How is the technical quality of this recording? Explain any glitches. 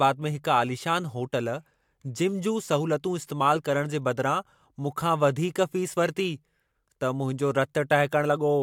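Nothing in the recording stood out as a technical problem on listening, so there are no glitches to explain.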